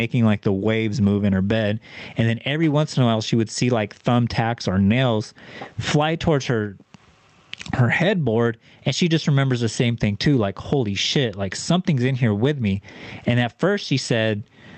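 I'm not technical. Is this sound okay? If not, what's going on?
No. Throughout the clip there is gain pumping: the level is pulled down each time someone speaks, so loud and quiet parts sit oddly close in level. The likely cause is microphone gain set far too high, with an automatic limiter repeatedly pulling it back down.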